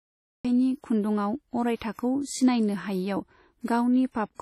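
The first 0.45 s are dead digital silence, and the speech then starts abruptly mid-sound with no natural attack. This is a cut-off start: the recording began late. Throughout, the speech sounds ringing and washy, with hiss that swells and shrinks with the signal and nothing above 15 kHz. That is heavy damage, likely WMA compression at a low bitrate near 32 kbps. From 1.76 to 1.81 s and from 1.93 to 1.99 s, a brief hiss of about 55 ms comes just ahead of sharp attacks and softens them. This is pre-echo, where the codec spread noise sized for the loud onset across the quiet moment before it.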